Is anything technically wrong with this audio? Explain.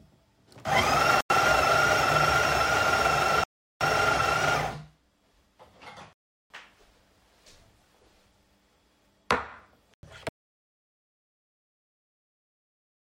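Yes. The audio has four blocks of digital silence and then an audio dropout to silence that runs to the end.

Blocks of digital silence come at 1.21 to 1.30 s and 9.94 to 10.03 s, each about 93 ms, and at 3.44 to 3.81 s and 6.13 to 6.50 s, each about 372 ms. The short blocks fit a 4096-sample buffer and the long ones a 16384-sample buffer that was likely not filled in time. The sound snaps to silence and back with no fade. On a waveform these show as flat lines, and on a spectrogram as empty vertical strips.

The audio dropout to silence starts at 10.29 s and lasts to the end. The sound cuts off mid-flow into total silence with no room tone. A lost input, likely a disconnected device or failed link, left silence being written. On a waveform it is a flat line, and on a spectrogram it is a blank region.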